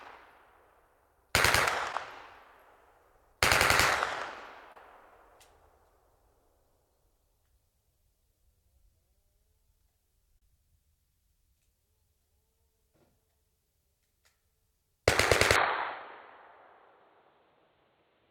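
At 1.92 s, 4.72 to 4.76 s and 10.38 to 10.42 s, there is short concealed packet loss. Audio arrived too late for the decoder, which patched each gap of roughly 10 to 30 ms by extending the preceding sound. Each patch is heard as a brief smear or wobble.

From 15.56 s to the end, the sound abruptly turns duller and boxier, with nothing above 4.4 kHz. The level barely changes, and there is no gap at the switch. A faint new noise floor sits well below the audio. The likely cause is an input switched to a poorer device.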